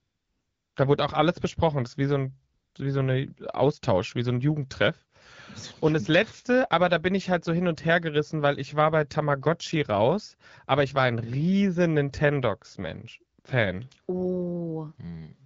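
AMR comfort noise fills three gaps: 0.00 to 0.75 s, 2.53 to 2.75 s between "ist wie so ein" and "wie so ein", and 13.39 to 13.43 s. Speech frames stopped. Smooth synthetic noise replaces the real background, switching in and out.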